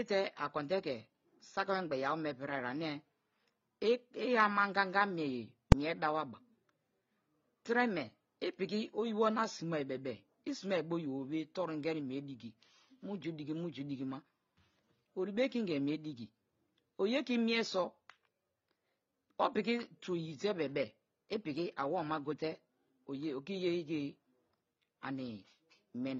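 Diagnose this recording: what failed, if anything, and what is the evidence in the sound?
Throughout the speech there is a layered codec sound: a low, hard band-limit typical of a low-rate AAC-LC encode, plus the smeared, slightly metallic upper band of spectral band replication on top. This is likely transcoding between lossy codecs, consistent with a roughly 24 kbit/s AAC-LC encode re-encoded as HE-AAC near 32 kbit/s. The second encoder spends bits re-coding the first one's artefacts, so both sets are heard together. On a spectrogram, the low cut-off inherited from the first encode stays in place throughout.

At 5.72 s a single loud bang cuts through the speech. It comes from invalid numbers at full scale, a failure in the sample-format conversion or processing stage. A calculation produced infinite or invalid values, which were clamped to the largest positive or negative code for one processing block. 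The block lasts 2.9 ms, which fits a 128-sample block. On the waveform it is a flat slab pinned at one extreme, far beyond the speech peaks. On the spectrogram it is a bright full-band vertical stripe.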